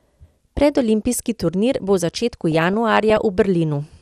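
Throughout, the speech is dull and granular, with upper bands switched off and gurgling quantisation, likely MP2 compression at a low rate around 80 kbps. At 0.57 s, and again from 2.52 to 3.18 s after "turnir bo v začetku", DAB burbling appears: bit errors slip past error correction, putting short blips of noise into single sub-bands.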